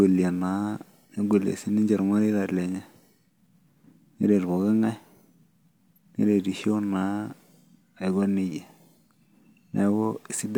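No technical faults can be heard anywhere in this speech recording. There is nothing in it that calls for a timestamp or a fix.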